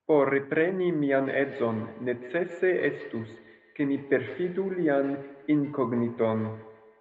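Speech clip, and from about 1.1 s right through to the end there's a feedback echo between two devices: each phrase comes back roughly every 150 ms, peaking at about 15 dB under the direct speech, thinner and ringier on each pass. That's two devices in the same room on one call, one playing out what the other's mic sent, which gets picked up again; neither echo canceller touches the other device's playback. The top end stopping at 8 kHz is just the call path's band limit.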